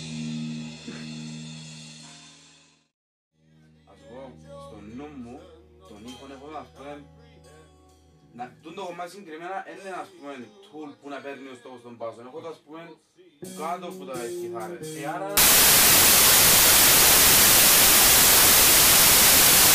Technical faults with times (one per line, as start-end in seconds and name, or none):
15.37-19.75 wrong sample width